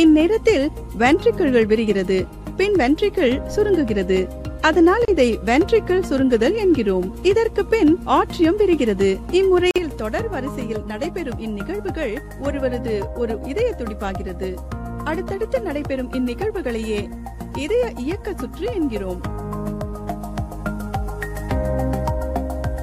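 At 5.05 s the sound drops out for about 31 ms, and at 9.71 s it drops out again for about 48 ms. Both are gaps at a join of encoded pieces. Separately encoded segments were butted together without trimming, so each segment's encoder start-up delay and final-frame padding remain as silence. The edges of each hole are smeared by the codec, and the audio resumes exactly where it left off.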